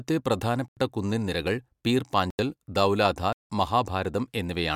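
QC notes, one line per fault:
0.68–0.77 s and 2.30–2.39 s, block of digital silence: the speech drops to silence for about 85 ms, cutting out and back with no fade. That fits a 4096-sample buffer at 48 kHz going out unfilled.
3.33–3.50 s, block of digital silence: a longer 170 ms hole, about two buffers' worth, with the same abrupt cut in and out, so it reads as a short hole.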